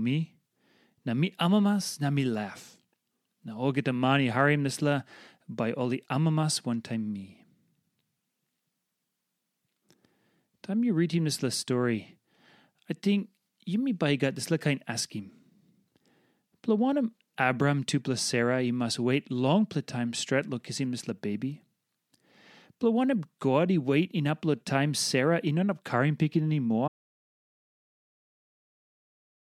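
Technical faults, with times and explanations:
26.88 s to the end, audio dropout to silence: right after "on up carrying picking" the speech stops mid-flow and never returns, leaving about 2.5 s of total silence with no room tone underneath. The input was likely lost, through a disconnection, link failure or accidental mute, while recording carried on writing silence. On a waveform the trace collapses abruptly to a flat line. On a spectrogram every frequency band drops to uniform black, unlike a natural pause's faint noise floor.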